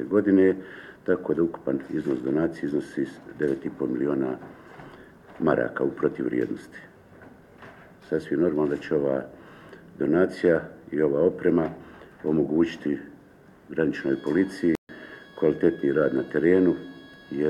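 Around 14.75 s the audio cuts out for about 0.14 s, until 14.89 s. That's a playback stall, most likely the player starving for data or getting its thread blocked.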